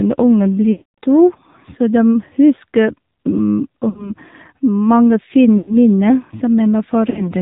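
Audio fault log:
Throughout: AMR narrowband mobile codec. The speech has been squeezed through the mobile codec at what sounds like about 7.4 kbps. Nothing survives above 4 kHz, so it's muffled and boxy, and the vocal-tract model gives it a buzzy, synthetic edge you can plainly hear.
0.72–0.98 s, 3.90–4.14 s, 5.58–5.77 s, 7.10–7.31 s: lost AMR speech frames. At each spot the decoder ran on stale pitch and vocal-tract settings with dropping gain, so the sound smears and fades. The first gap, about 260 ms, drains to silence before recovering roughly. The others are shorter dips and warbles.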